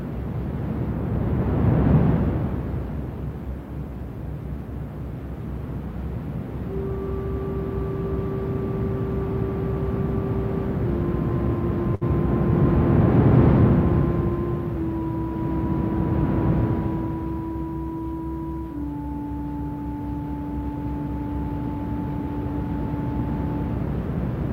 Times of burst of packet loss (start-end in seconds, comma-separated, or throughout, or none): 11.95-12.03